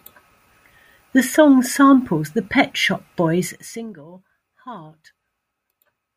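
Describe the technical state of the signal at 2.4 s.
At 2.4 s the speech signal is intact, with no technical fault present at that moment.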